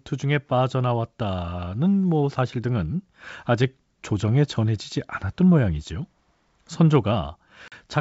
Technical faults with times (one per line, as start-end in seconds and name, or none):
7.68-7.73 packet loss on an ADPCM call